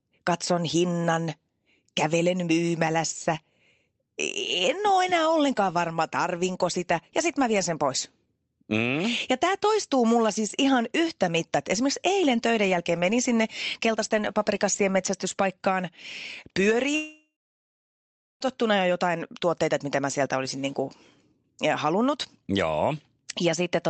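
From 16.95 s to 18.43 s, the speech turns into a fading buzz carried over from the last sound, then about a second of silence. It resumes with roughly 1.5 s missing. The likely cause is a long network dropout, with the receiver concealing the gap before giving up.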